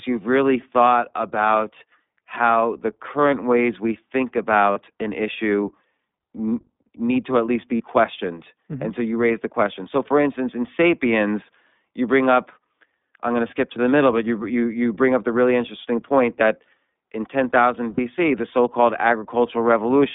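Speech here runs through the iLBC codec the whole way, plainly audible as a narrow telephone band of roughly 200 Hz to 3.6 kHz with a slightly rough, synthetic edge. The 20 ms framing and coding rate fit iLBC's 15.2 kbps mode. There are four spots of lost iLBC frames, where the decoder fills the gap by repeating the last pitch cycle with some noise, so you hear a brief held, buzzy vowel: at 4.72 s, between "current ways we think" and "an issue"; at 7.77 s; at 13.48 s, after "I'm going to" and before "to the middle but"; and at 17.94 s, just before "the so called". Each lasts 20 to 40 ms, and the voice snaps back right after.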